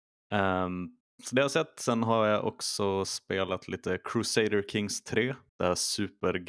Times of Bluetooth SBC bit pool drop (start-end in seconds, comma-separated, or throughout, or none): none